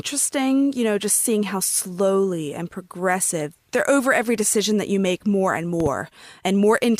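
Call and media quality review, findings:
Loud pop, 5.80–5.89 s, just after "you make more and": two sharp pops, peaking a few dB above the speech, which continues underneath. Likely a voltage step from a plug, switch or static discharge, shaped by downstream circuitry.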